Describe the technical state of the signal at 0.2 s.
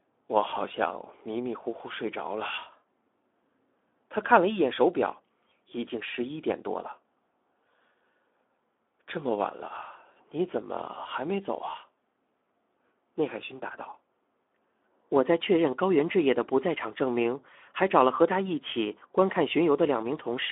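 At 0.2 s the speech sounds hoarse, grainy and boxed-in, confined to about 250 Hz to 3.5 kHz with nothing above 3.7 kHz. This is Speex codec damage throughout, consistent with an 11 kbps setting that starves the excitation of bits.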